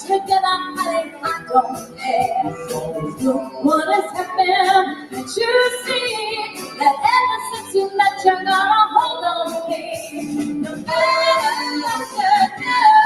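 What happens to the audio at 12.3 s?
A noise suppressor built for speech has been left running on this material, and throughout the clip it treats sustained and decaying parts of the sound as noise, swinging its gain reduction by around 15 dB so that the sound pumps and thins as tails are pulled down while onsets pass. At 12.3 s the sound is cut by the noise suppressor: between 12.06 and 12.61 s it misjudges the sound as noise and clamps it harder, dropping the level by up to about 9 dB. Roughly a fifth of a second within that span is affected, and the sustained part sinks in level or has its decay cut short.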